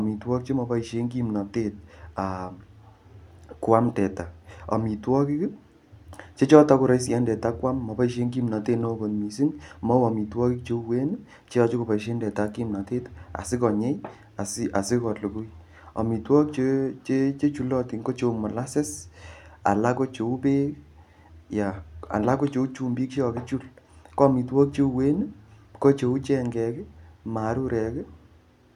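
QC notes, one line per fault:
No faults heard.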